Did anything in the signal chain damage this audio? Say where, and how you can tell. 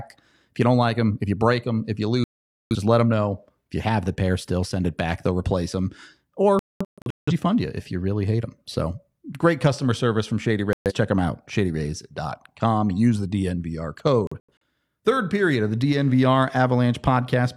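Yes. The damage happened at the broadcast reception stage. A digital broadcast dropout occurred: the receiver lost the signal or rejected corrupted frames, then muted until clean ones arrived. The speech cuts to silence at 2.24 to 2.75 s, 6.59 to 7.33 s, 10.73 to 10.92 s and 14.27 to 14.52 s. The second and fourth gaps break into several short holes rather than one. The gap lengths fit whole frames of about 43 ms, and whatever was sent during the mutes is lost.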